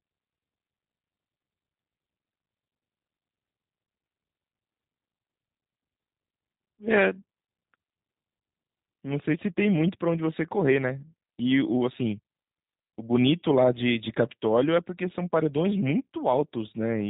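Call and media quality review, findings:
G.729 codec damage, throughout. Speech band-limited, nothing above 4 kHz, with a plainly rough, synthetic texture. Sound fits G.729A at 8 kbit/s: speech rebuilt from a vocal tract filter, pitch predictor and a few pulses per 5 ms, discarding fine detail.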